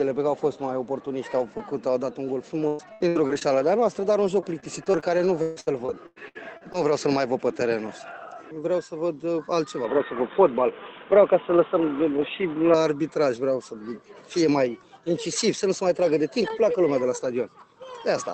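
From 2.67 to 3.60 s, repeated packet loss (robotic sound) leaves six gaps, the longest 114 ms, with about a third of the stretch concealed. It returns from 3.96 to 6.76 s with twelve gaps, the longest 143 ms. Each hole is bridged by stretching the last sound, so the audio turns choppy. A spectrogram shows smeared, repeated patches, and the waveform shows short looped segments.

From 9.85 to 12.74 s, the input was likely switched to a poorer device. With no silence at the switch, everything above 3.8 kHz vanishes, the level shifts by about 5 dB, and a new noise floor appears about 30 dB down, so the sound turns dull and boxy. A spectrogram shows a sharp ceiling at 3.8 kHz.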